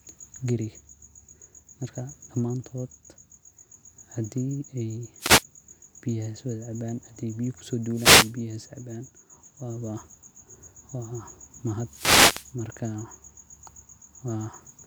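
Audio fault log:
5.18–5.44 s, 7.90–8.37 s and 11.86–12.54 s: wireless microphone noise hit, where the FM radio link fades as reflected signals cancel, so receiver noise rises into brief swishes of static over the speech.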